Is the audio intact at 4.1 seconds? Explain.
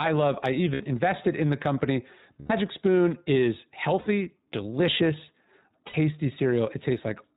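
No. From 4.00 to 4.07 s the sound is patched over by concealment of lost iLBC frames, ending just before 4.1 s. The gap, about 60 ms, fits three lost 20 ms frames. The decoder repeats the last pitch cycle mixed with noise, so the hole is filled with a brief, held, faintly buzzy vowel rather than silence. That fill is what separates it from a plain dropout or a muted gap. Because each iLBC frame is decoded independently, the voice snaps back cleanly right after 4.07 s, without the slow recovery of codecs that depend on earlier frames.

At 4.1 s the sound is also shaped by the iLBC codec, which runs through the whole clip at 15.2 kbps. It is narrowband, with nothing above 4 kHz, so the speech sounds muffled like a phone call. Its frame-by-frame excitation coding also adds a plainly audible synthetic roughness. That grainy, slightly artificial texture sets it apart from simple low-pass filtering or G.711 telephone audio, which are dull but smooth.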